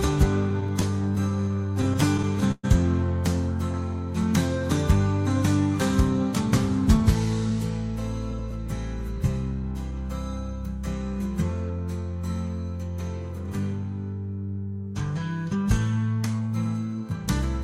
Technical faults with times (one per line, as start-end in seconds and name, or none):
0.49-2.65 repeated stalls (stutter)
16.26-16.66 jitter buffer speed-up